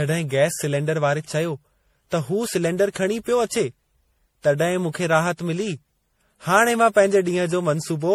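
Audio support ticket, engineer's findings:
Generation loss throughout: likely repeated MP3 re-encoding, around seven passes, fitting 64 kbit/s. Speech sounds swirly, hollow, smeared; consonant attacks blurred beyond one pass.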